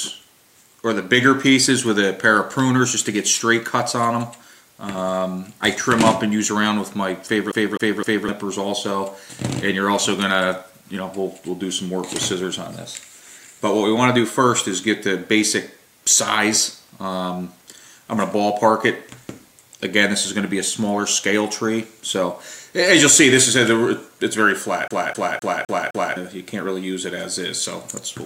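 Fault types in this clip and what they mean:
CD stuck on one turn: a scratch knocks the laser back one track each revolution, so a 0.26 s slice repeats with a brief mute at every jump, three times from 7.51 s and five from 24.88 s. Unlike random dropout stutter, the repeats are identical and evenly spaced.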